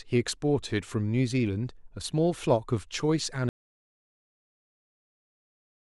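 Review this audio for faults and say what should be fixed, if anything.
At 3.49 s the speech cuts off mid-flow and the rest of the clip, to the end, is dead silence with no room tone underneath, a clear audio dropout to silence. That kind of total silence likely means the input was lost, through a disconnected device, a failed link or an accidental mute, while the recorder kept writing empty samples, so whatever followed is gone. To prevent it, secure cables and connections and watch input meters during recording.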